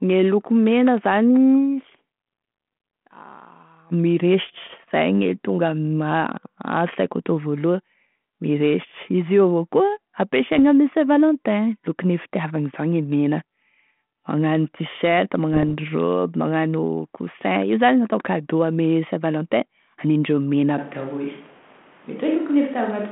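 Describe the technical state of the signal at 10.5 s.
Bit errors on an ADPCM link strike from 10.49 to 10.60 s: flipped bits, roughly one in a thousand, derail the decoder's step size and predictor, leaving pops and a rough, level-jumping burst.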